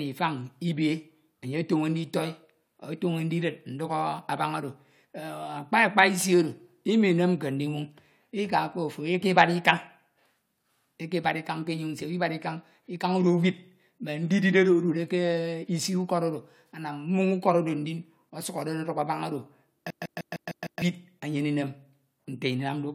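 From 19.90 to 20.82 s the speech sticks like a CD stuck on one turn: a 0.15 s slice repeats six times, each jump marked by a brief mute. The waveform shows identical blocks separated by thin gaps; the spectrogram shows a repeating pattern broken by narrow vertical silences.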